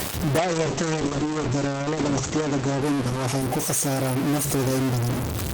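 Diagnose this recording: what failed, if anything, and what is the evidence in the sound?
A distortion runs through the whole speech clip, and the pauses fill with noise instead of falling silent. The likely cause is a stuck bit at the converter or in its data lines. On a waveform, samples jump by a fixed step; a spectrogram shows broadband hash filling the gaps.

A call bitrate drop begins at 0.38 s and lasts until 5.33 s. The encoder falls from 32 to 9 kbps, staying at its lowest for 1.88 s, and the sound turns coarse, watery or muffled. On a spectrogram, energy above 8 kHz disappears, because the codec narrows its band from 20 kHz.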